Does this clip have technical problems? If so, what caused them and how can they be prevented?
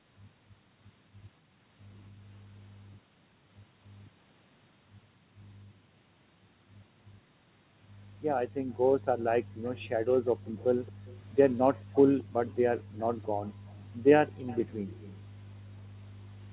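Yes. The echo canceller clamped the microphone whenever its loudspeaker played, causing background gated by the echo canceller. The room sound drops out at 1.41–1.56 s (about 13 dB), then much harder, about 39–40 dB, at 8.49–9.63 s, 10.41–11.05 s and 11.73–13.68 s, returning once suppression releases. Preventing it means tuning the suppressor to attenuate more gently or adding comfort noise so the background doesn't vanish.

An echo leak, likely from a loudspeaker-side echo canceller failing to fully cancel what its microphone picked up and sending the residue back, adds a faint delayed copy of the speech, 224 ms late and roughly 25 to 30 dB down, at 9.63–11.21 s and 11.75–15.21 s. A headset at that end, or better echo-path alignment and adaptation, would prevent it.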